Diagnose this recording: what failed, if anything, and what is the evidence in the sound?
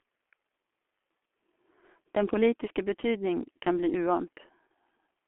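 At the codec stage, G.723.1 coding across the whole clip: muffled, hoarse speech with smeared consonants; a spectrogram shows energy confined to 250 Hz to 3.4 kHz, consistent with roughly 6.3 kbit/s.

At the network stage, VoIP packet loss concealed by the speech codec at 4.68 to 4.70 s: a brief, fading smear where the decoder extrapolated, matching a single lost 30 ms frame.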